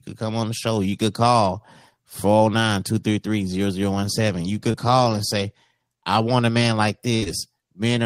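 At about 4.71 s there's a short concealed packet loss: roughly 20 ms of the speech didn't reach the decoder in time, so the receiver patched the hole by extending what it had just played, carrying the pitch forward if the sound was voiced, or using shaped noise if it wasn't, and then crossfaded back into the real signal by 4.76 s. You get a quick smear or wobble there, and a short consonant could go missing.

Then from 7.16 to 7.24 s there's a burst of packet loss, about 60 ms gone in one go. The concealment stretched the last sound across the gap and faded it down, so you'd hear a brief held buzz or a dying hiss, and when the audio comes back that stretch of speech has simply been skipped.

Right after that, from 7.24 to 7.28 s, another short concealed loss of about 20 ms follows on directly, so the recovery gets a second little smear before it settles.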